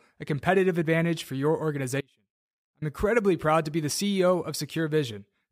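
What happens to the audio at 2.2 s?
An audio dropout to a faint residue runs from 2.01 to 2.82 s: the signal cuts abruptly, likely a break upstream, leaving only faint sound roughly 35 dB down.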